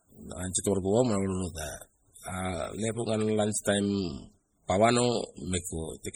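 Speech, with heavy MP3 compression damage throughout. The treble is cut off and the sound turns watery and swirly. Sibilants chirp metallically. The likely cause is a starved encoder dropping weak frequency lines frame by frame, which fits a very low bitrate around 32 kbps.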